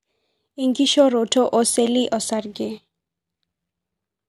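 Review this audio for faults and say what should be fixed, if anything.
Nothing here needs fixing, since I couldn't hear any technical faults anywhere in the recording.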